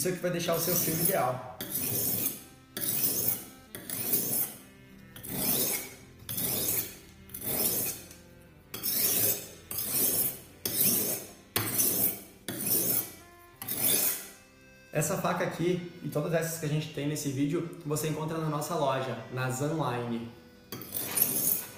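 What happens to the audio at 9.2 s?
At 9.2 s you're in the middle of a stretch, from 4.34 to 12.34 s, where the adaptive stream drops to a lower bitrate. Codec artefacts rise, consistent with Opus falling from around 64 to 24 kbit/s. The switch is abrupt but leaves no gap.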